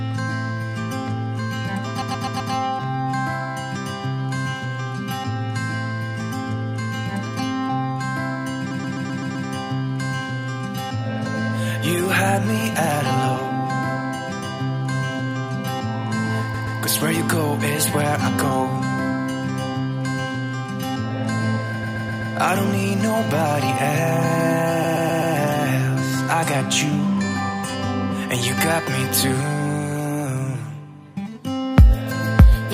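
At 2.00, 8.70, 16.53, 21.82 and 24.83 s, repeated frames make a 128 ms block play again two to six times. Each stutter stretches the audio.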